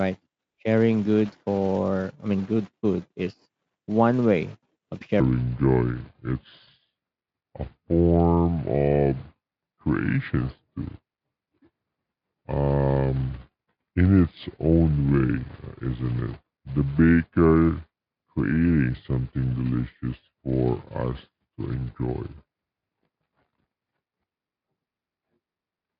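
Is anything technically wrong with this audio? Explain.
Yes. From 5.2 s, right after "is one way of", to the end, the section is at the wrong speed: it plays at 0.668 times its original speed, likely from resampling to the wrong clock. It sounds deep and slow, about seven semitones low. On a spectrogram, the harmonics drop and spread out in time. Through this the Speex coding shows faint damage at most.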